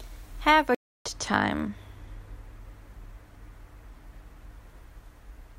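Speech clip with a playback stall from 0.75 to 1.06 s: about 0.31 s of silence, likely because the player ran out of data.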